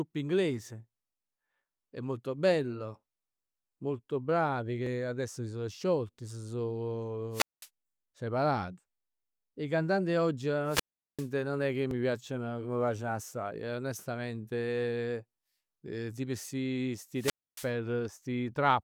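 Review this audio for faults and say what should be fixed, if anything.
Two jumps in the speech occur at 4.87 s (about 20 ms missing) and 11.91 s, between "nun è che" and "piacciono ca m' piaceno" (about 10 ms missing). This is likely a dropped buffer (overrun): samples were overwritten before being read, and the two sides were spliced together with no gap. Larger capture buffers or a higher-priority recording thread would prevent it.

Wireless microphone squelch dropouts occur at 7.32–7.68 s (about 205 ms muted), 10.65–11.29 s between "cantanti 'e oggi" and "nun è che" (about 390 ms), and 17.14–17.71 s after "tipo sti" (about 275 ms). Each time, the RF signal faded, hiss rose, and the receiver's squelch muted the output until the carrier returned. Better antenna placement, a shorter transmitter-to-receiver distance, or diversity reception would prevent it.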